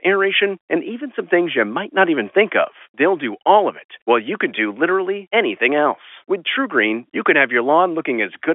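No technical faults turn up in the speech, which carries the narrow 300 Hz to 3.4 kHz band of ordinary G.711 telephone coding, consistent with a 64 kbps mu-law line.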